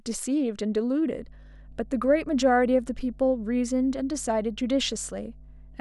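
From 1.14 s to the end of the clip, mains hum sits under the speech: a steady 50 Hz tone with some low harmonics, roughly 20 dB below the speech level. It points to a ground loop or a nearby transformer coupling the power line into the signal path.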